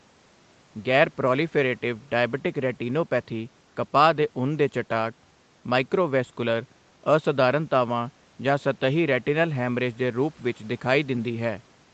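No technical faults are audible.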